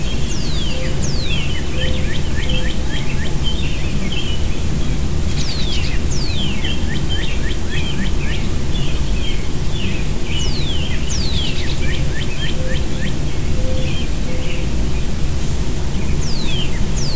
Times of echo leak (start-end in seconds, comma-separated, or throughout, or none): none